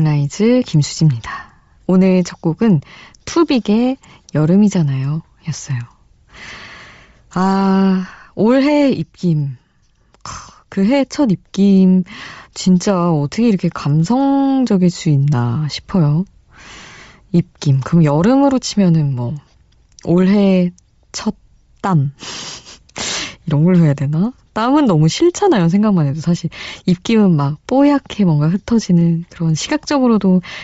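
From start to finish the speech carries a breathy, grainy edge. The upper frequencies sound hissy and smeared rather than crisp, and the damage is plainly audible. The likely cause is Bluetooth LC3 compression. The LE Audio transform codec has thrown away much of the upper spectrum and filled the gaps with synthetic noise. That degree of loss fits a low bitrate of around 32 kbps with short 7.5 ms frames.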